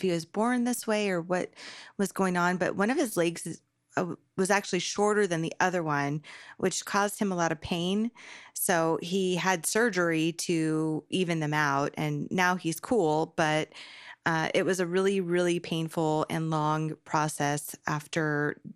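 From start to end the speech is dull, with a gurgling, granular grit. The likely cause is MP2 compression at a rate that fits about 80 kbps, starving the upper sub-bands of bits so they drop out. A spectrogram would show the top flickering in blocky patches.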